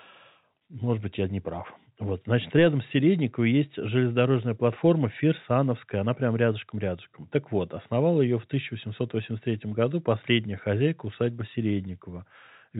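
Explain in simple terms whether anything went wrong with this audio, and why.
Nothing went wrong with this audio; the speech comes through the telephone line the way a normal call does.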